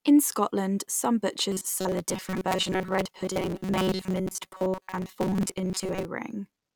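From 1.52 s to 6.05 s the speech hardens into a rigid, metallic buzz pitched at 188 Hz, still loosely tracking the syllables. This is robotic sound from repeated short buffers: the likely cause is audio arriving too slowly, so the playback keeps looping the last fragment instead of advancing. A 188 Hz drone fits a loop of about 5.3 ms, and most of this stretch appears to be repeats rather than fresh audio.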